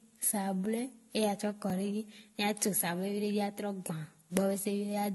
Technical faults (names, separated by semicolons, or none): transcoding between lossy codecs; block of digital silence